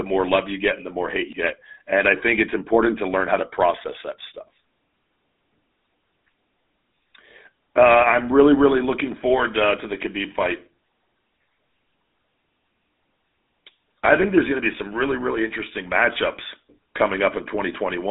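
From start to finish the speech carries GSM full-rate codec damage. The band runs from 200 Hz to 3.7 kHz, with nothing above 3.8 kHz. A plainly audible buzzy, gravelly roughness comes from rebuilding speech with sparse, regular pulses, which fits 13 kbps coding.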